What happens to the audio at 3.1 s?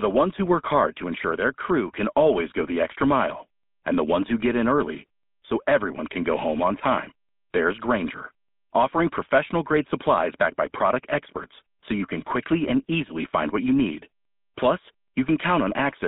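At 3.1 s, as across the whole clip, the speech carries GSM full-rate codec damage. The codec drives a vocal-tract model with sparse, regularly spaced pulses, giving a plainly buzzy, gravelly roughness, with the band held to about 200 Hz to 3.6 kHz, consistent with 13 kbps coding.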